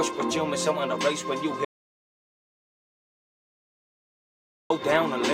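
At 1.65 s the sound cuts off abruptly into an audio dropout to silence lasting about 3.05 s, until it resumes at 4.70 s. The gap is silent with no room tone, unlike a pause or gate, most likely from a lost input while recording continued.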